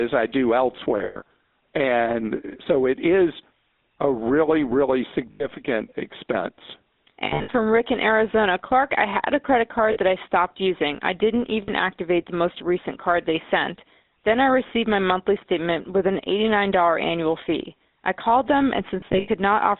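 Throughout, the speech carries the buzzy, gravelly roughness of the GSM full-rate codec. The band runs from 200 Hz to 3.7 kHz, with nothing above. The excitation is coarsely modelled pulses, so the damage is plainly audible.

Lost GSM frames occur at 0.98 to 1.22 s, 5.32 to 5.47 s, 9.92 to 9.98 s, 11.62 to 11.70 s, and 19.00 to 19.29 s. The gaps last 180, 80, 40, 60 and 140 ms. Each gap is filled by repeating the last good settings. That gives a rough, metallic ring. The first and last events are scattered, with the longest runs roughly 100 and 70 ms.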